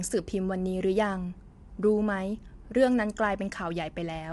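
Throughout the speech there is plainly audible coding damage. The voice sounds rough and grainy. Noise fills the gaps between the pitch harmonics. Nothing is left above 11.6 kHz, so the top end sounds dulled. The likely cause is low-delay AAC compression, as used in video calls. Its short frames cannot separate closely spaced harmonics well. The damage level fits a bitrate near 32 kbps. At that rate the coder cannot keep fine detail.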